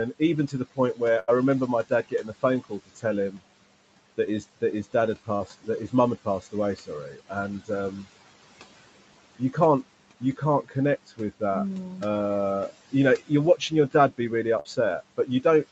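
Throughout, the noise suppressor lowers bands it judges to be steady noise by about 18 dB, frame by frame, so the background sinks and swells with the speech. From 0.19 to 1.01 s the same suppressor mistakes parts of the speech for noise and turns them down by up to about 16 dB, so soft consonants and endings sound swallowed for a fraction of a second in all. At 1.19 to 1.30 s a burst of packet loss leaves about 80 ms undelivered. The receiver stretches the last sound and fades it into a held buzz or hiss, then resumes further on with that stretch missing. Speech is cut again by the noise suppressor from 1.67 to 3.40 s (up to about 18 dB, roughly half a second affected) and from 4.17 to 8.06 s (up to about 16 dB, under a second affected). Within that span, at 5.36 to 5.42 s, short concealed packet loss fills a 40 ms hole with synthesised continuation, heard as a brief smear or wobble. The noise suppressor cuts speech again from 10.20 to 11.41 s (up to about 11 dB) and from 12.70 s to the end (up to about 15 dB). 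Inside that last span, a second burst of packet loss at 14.60 to 14.67 s drops about 60 ms, with the same fading buzz or hiss and a jump ahead.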